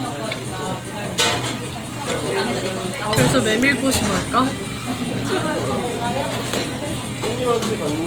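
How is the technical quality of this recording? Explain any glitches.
The recording carries plainly audible compression damage from start to finish. Opus compression is the likely cause. Band energy is kept, but thin bits force fine detail to be filled with noise. Tonal parts turn grainy and rough. The damage fits a low rate near 24 kbps in music mode. Bandwidth stays full, reaching about 20.2 kHz.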